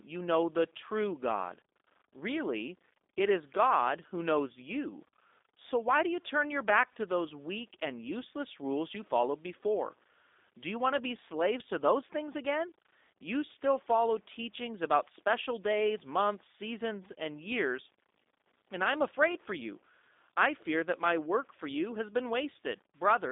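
From start to finish the speech passes through a G.729 codec, which fits an 8 kbit/s VoIP link. Each 10 ms frame is rebuilt from a vocal tract filter, pitch prediction and a few pulses, leaving a narrow 250 Hz to 3.7 kHz band and a plainly rough, synthetic texture.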